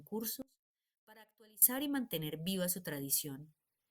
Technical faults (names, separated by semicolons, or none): audio dropout to a faint residue